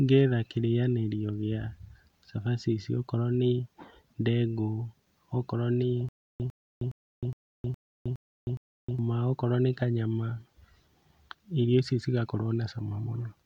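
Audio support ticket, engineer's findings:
Stutter with silent gaps, 6.09–8.99 s, after "okorwo nĩ". 101 ms fragment repeats 7 times, 313 ms digital silence between, 414 ms period. Resumes at "okorwo nĩ kanyama". Likely stream stall replaying last buffer per retry; gap audio lost.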